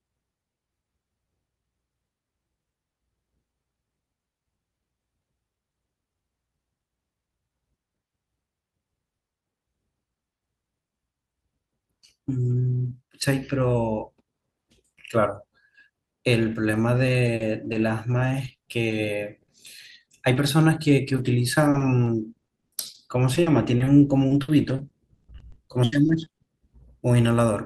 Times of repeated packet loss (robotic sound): 16.43-26.48

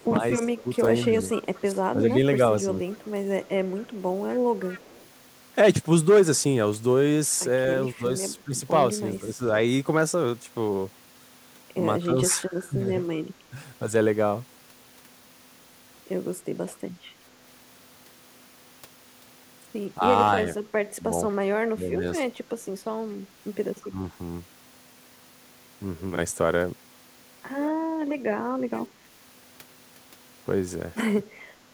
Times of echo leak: 0.00-5.08, 23.82-23.88

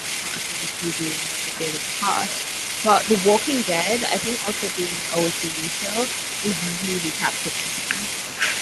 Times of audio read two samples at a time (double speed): none

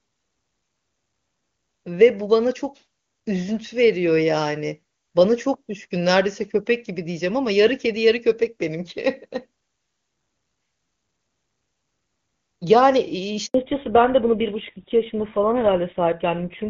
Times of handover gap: 13.46-13.54

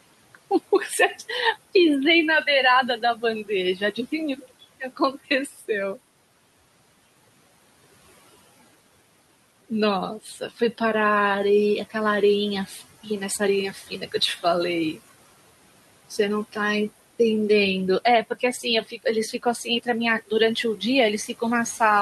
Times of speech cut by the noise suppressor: 3.02-3.98, 4.38-5.00, 5.46-5.69, 10.23-10.80, 12.67-13.06, 13.73-14.44, 18.30-19.87

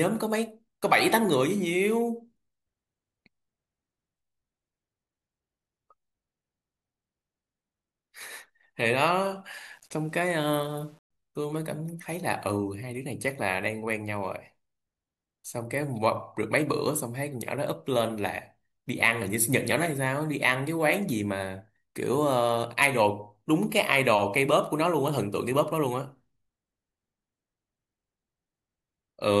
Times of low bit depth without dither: 9.54-11.11

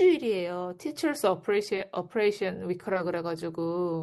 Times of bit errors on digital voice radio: none

